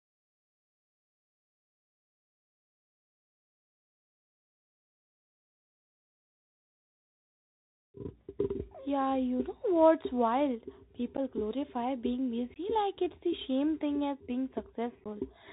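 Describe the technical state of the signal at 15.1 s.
At about 15.04 s, just after "same thing as being", unconcealed Bluetooth headset packet loss drops roughly 15 ms of audio: a few lost packets replaced by silence or an idle pattern, leaving a hole with abrupt edges, a sharp-sided gap in the waveform. The Bluetooth CVSD headset codec degrades the whole clip: one-bit delta coding at 64 kHz blocks everything above 4 kHz, so the spectrogram is empty up there, and it adds scratchy sibilants and granular hiss.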